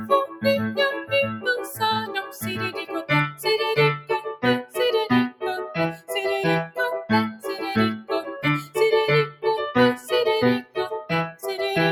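Noise suppressor applied to music or sounds runs throughout: a speech-tuned suppressor treats sustained sound as noise, so the level swings by around 10 dB and tails thin out. Sound cut by the noise suppressor hits at 0.27–0.43 s (about 11 dB), 1.59–1.75 s (about 4 dB), 2.06–2.4 s (about 8 dB), 2.75–3.1 s (about 12 dB), 4.28–4.43 s (about 15 dB) and 5.96–6.11 s (about 15 dB), each a brief dip where held or decaying sound is pulled down while attacks pass.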